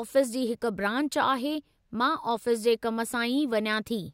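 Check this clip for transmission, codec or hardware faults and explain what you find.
Nothing in the speech recording points to a transmission, codec or hardware fault. No audible event calls for further explanation.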